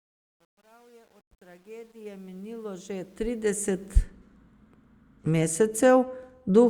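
From 0.0 to 4.02 s the fade-in has truncation distortion. The undithered gain stage rounds quiet samples to coarse steps, which fits 10-bit resolution. Until 2.65 s the speech sounds gritty. The waveform shows staircase steps, and the spectrogram shows grainy broadband hash.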